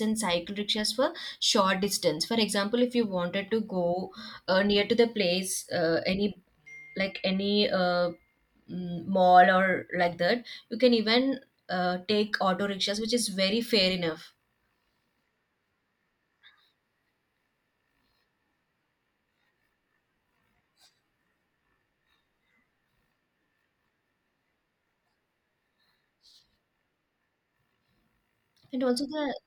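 Speech recording with no technical faults to report.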